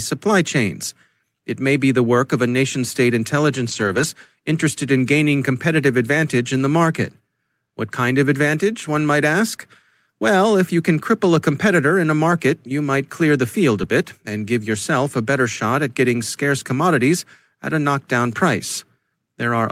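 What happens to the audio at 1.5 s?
Nothing goes wrong at 1.5 s: the speech there plays through intact, with no dropout, click, distortion or other audible fault.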